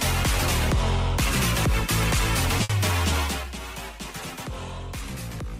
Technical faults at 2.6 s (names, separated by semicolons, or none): burst of packet loss